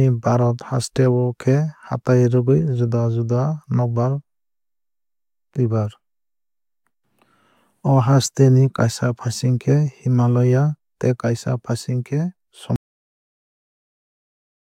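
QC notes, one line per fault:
12.76 s to the end: audio dropout to silence. The speech cuts off mid-flow and the last two seconds or so are silent, with not even room tone underneath. That dead-flat gap is the giveaway. The recorder kept writing silence after its input went away, most likely because a mic or interface dropped off or a mute got hit. Whatever was said in that stretch never made it into the file.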